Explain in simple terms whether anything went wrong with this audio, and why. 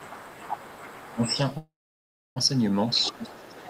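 From the start to 2.59 s, and again from 2.88 s to the end, a faint second voice sits behind the main speech: the other side's voice leaking through, likely loudspeaker echo not fully cancelled. It's quieter and separate, not a glitch in the main voice.

At 1.11 to 1.37 s, and from 2.96 s to the end, the main voice sinks noticeably while that second voice is present. This is speech suppressed in double talk, likely the echo canceller turning both down at once.

Between 1.57 and 2.38 s the sound stops, fading to near silence for most of that stretch, then resumes exactly where it left off. This is a call audio freeze, likely a late network delivery. Nothing is skipped, only delayed.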